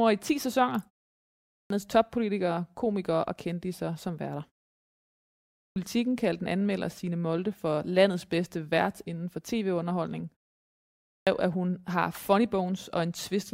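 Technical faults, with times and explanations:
1.44 s, 5.52 s and 10.98 s: clipped start after a pause. After silences of 0.62, 1.09 and 0.7 s, the output device wakes late and swallows the first 263, 241 and 288 ms of sound. The waveform jumps from flat straight to full amplitude, and the spectrogram shows no onset energy.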